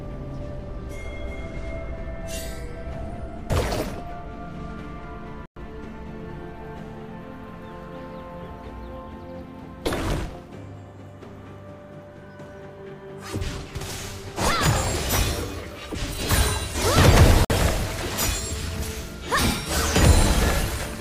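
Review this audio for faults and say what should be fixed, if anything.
Two Bluetooth stalls cut the sound to silence at 5.46–5.57 s (107 ms) and 17.45–17.50 s (53 ms). They appear as flat waveform gaps and blank spectrogram columns, likely caused by delayed packets emptying the receiver's buffer. Shorten the wireless link and keep it clear of interference, or use a wired connection.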